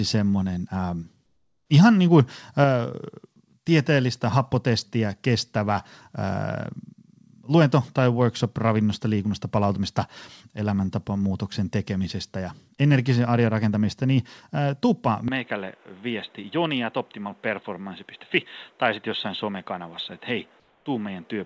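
Comfort noise in place of the background appears in this speech recording from 1.26 to 1.70 s, between "semmoinen ää" and "ihan niin kuin", and again from 20.60 to 20.86 s. In those pauses the real room sound gives way to a flat, featureless hiss, about 6 dB and about 4 dB quieter respectively, likely because discontinuous transmission halted the audio and the receiver synthesised filler noise. An input switched to a poorer device takes over at 15.28 s, right after "rakentamista niin äh tuppa", with no gap at the change. From there to the end the sound is boxier, a little quieter, and sits on a different noise floor, well below the speech. This is likely a change to another microphone or a headset's call profile, narrowing the band the call path had carried up to 8 kHz.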